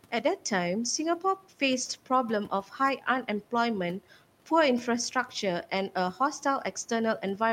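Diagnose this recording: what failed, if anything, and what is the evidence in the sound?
The fault is speech cut by the noise suppressor, at the call-processing stage. Between 2.5 and 2.73 s, parts of the speech drop by up to about 9 dB, roughly a tenth of a second in all. The suppressor misread them as noise and turned them down with the room noise, which sits about 24 dB below the speech.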